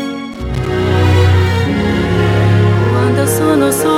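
A worn or dirty contact somewhere in the signal path is making and breaking as it shifts, and from 0.32 to 0.67 s this shows up as loose connector crackle. Each time the contact opens, the signal is chopped off for an instant, and the interruptions come at irregular intervals, so the audio is overlaid with a ragged burst of scratching and crackle lasting about a third of a second before the connection settles.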